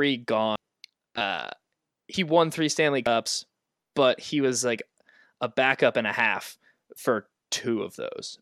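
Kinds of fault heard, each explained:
Dropped buffer (overrun): the speech jumps abruptly forward three times, each with no gap of silence, at 0.56 s, at 2.14 s just before "won three", and at 3.07 s. The first skip removes roughly a third of a second, the later two about a tenth each. The likely cause is the recording software failing to collect its buffers in time, so the hardware overwrote them and the remaining audio was spliced directly together.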